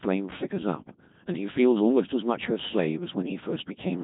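From start to finish the speech has that unmistakable Codec 2 vocoder character, heavily damaged: robotic and buzzy, as if a machine were humming the voice back. Rather than keeping the waveform, the coder sends only pitch, voicing, energy and a rough spectral envelope, and the decoder rebuilds everything from sine waves. The coarseness fits a 2.4 kbit/s mode. Nothing survives above about 3.8 kHz, so it sounds dull and boxy too.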